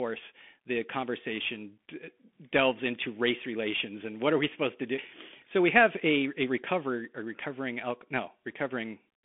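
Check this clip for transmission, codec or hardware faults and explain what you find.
Bluetooth CVSD headset codec damage runs throughout. The speech stops near 3.7 kHz, in a 250 Hz to 3.5 kHz band. One-bit up/down coding, fitting a 64 kbps link, lags fast loud highs. S sounds turn scratchy over granular hiss, unlike plain telephone band-limiting.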